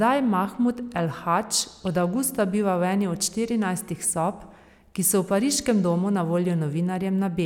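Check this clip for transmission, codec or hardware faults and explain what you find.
I found no faults to report in this clip.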